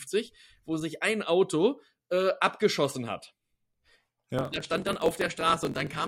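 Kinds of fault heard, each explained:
Block size mismatch (truncated): each 1024-sample block loses its tail before the next stage reads it, giving a 45.9 Hz buzz and audio running 1.07 times fast from 4.37 s.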